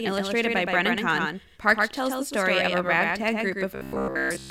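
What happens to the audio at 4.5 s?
At 4.5 s the speech has become a rigid, metallic buzz pitched at about 66.8 Hz, still loosely tracing the syllables. This robotic sound from repeated short buffers starts at 3.75 s, right after "story of a ragtag", and runs to 4.5 s. The likely cause is new audio arriving too rarely, so the same stretch of roughly 15 ms is looped to fill the gaps. Most of the real signal is skipped, and the constant repetition rate imposes that fixed buzz.

Under the buzz, the sound is also smeared by a hard, echo-like second copy that trails the original by roughly a tenth of a second. It is only about 5 dB quieter and shows no reverberant tail or room colouring. This doubled audio track runs through the whole clip, so it is present at 4.5 s as well. It is likely a second, slower capture path or two out-of-step copies summed in the mix.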